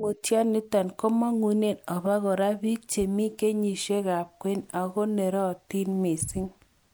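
A speech recording with no audible technical faults anywhere in the signal.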